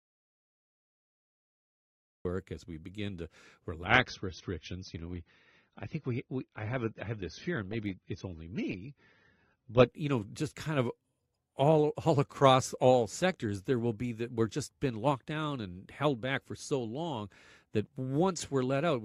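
The input signal was likely lost before the recording began, and silence kept being written, so an audio dropout to silence runs from the start to 2.25 s. That gap is silent with no room tone, and the speech then enters abruptly with "as we begin to".

Shortly after "as we begin to", at 3.85 s, the adaptive stream switched to a lower bitrate, and it stayed there until 9.85 s. Nothing above 6.3 kHz survives, and the speech turns dull, which fits a drop from roughly 96 to 24 kbit/s AAC. Full quality snaps back just before "you know just kind", with no gap.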